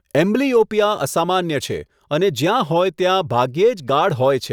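It's a speech clip with two small skips where audio goes missing between chunks, at 1.90 s just after "એમ્બ્લિયોપિયા અસામાન્ય છે" and again at 3.89 s. Each drops only a few milliseconds, and the two-second spacing likely points to a recorder losing a sliver at each chunk boundary.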